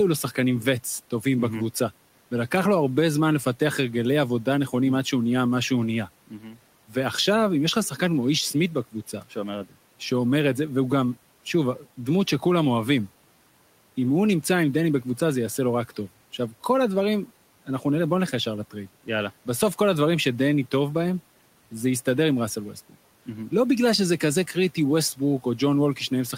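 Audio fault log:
6.28–6.59 s, speech cut by the noise suppressor: quiet speech was treated as noise and pulled down by about 13 dB, so it sounds swallowed and faint.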